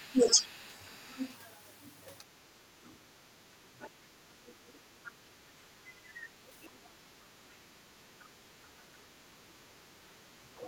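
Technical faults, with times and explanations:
0.08–0.49 s, 4.54–7.49 s and 9.67 s to the end, speech suppressed in double talk: the talker's level dips sharply, by roughly 15 to 25 dB, for roughly 400, 700 and 150 ms in total respectively. Both sides were likely talking at once, so the echo canceller could not separate them and attenuated everything.
0.28–1.32 s and 2.87–5.11 s, other side's voice leaking through: a second, fainter voice sits underneath, roughly 20 to 25 dB below the talker. It is likely loudspeaker playback that the echo canceller did not fully subtract from the microphone signal.
3.63–5.86 s and 8.66–10.04 s, background gated by the echo canceller: the room ambience drops by about 12 dB and about 10 dB respectively, for roughly half a second in total each time. The canceller clamps the microphone while the loudspeaker is active, then releases it.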